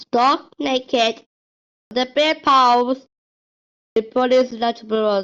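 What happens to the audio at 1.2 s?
At 1.2 s the speech carries on intact, with no dropout, click or distortion at that moment.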